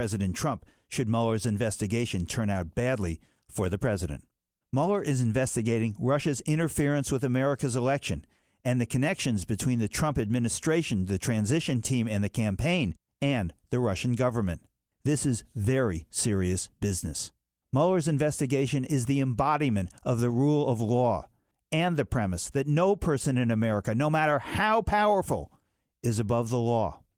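No technical faults can be heard anywhere in the recording; the speech signal stays continuous and stable throughout.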